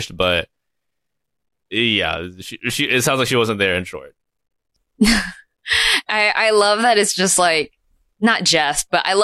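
No technical faults are audible.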